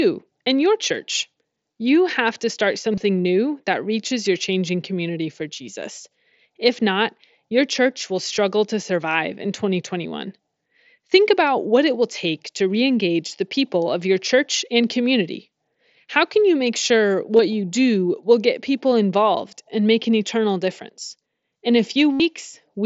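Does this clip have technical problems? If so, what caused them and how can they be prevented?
Yes. Concealed Bluetooth headset packet loss appears at 2.93–3.01 s, between "have to start" and "new that reaches your" (about 45 ms lost in short runs); at 17.37–17.39 s, after "can you make sure"; and at 22.13–22.20 s, a 75 ms run. The receiver filled each gap by repeating recent waveform. On the waveform this shows as copied, evenly periodic cycles. On a spectrogram it shows as flat horizontal harmonic bands, with a slight warble where real audio returns. Keeping the phone close to the headset with a clear line of sight, and away from busy 2.4 GHz Wi‑Fi, prevents most of these dropouts.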